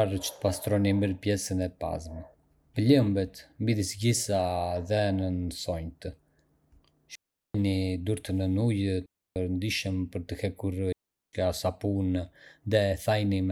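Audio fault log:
7.15–7.55 s, 9.06–9.36 s, 10.92–11.33 s: digital wireless dropout. The radio link lost too much data, so the receiver muted for about 0.39 s, 0.30 s and 0.41 s, cutting the speech to near silence with a quick fade and no burst of noise on either side.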